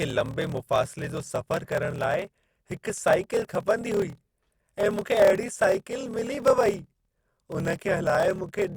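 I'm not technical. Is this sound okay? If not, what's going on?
No. Throughout, a block size mismatch (padded) puts a tiny silence after each chunk, causing a low 38 Hz buzz and speech about 11% slower. Unlike simple slow playback, the voice's character stays the same.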